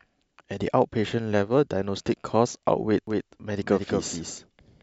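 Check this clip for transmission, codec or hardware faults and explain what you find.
A doubled audio track appears from 3.07 s to the end. The likely cause is the speech being picked up a second time through a slower path, so a second, full-band copy is mixed in roughly a fifth of a second behind the original and a few decibels quieter. Because that copy carries no reverberant decay or room colour, the voice sounds stuttered and smeared, like a clean echo, and it cuts in abruptly at 3.07 s.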